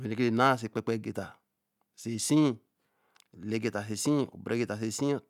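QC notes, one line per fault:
No fault found in this clip, so there is nothing to list in the QC notes.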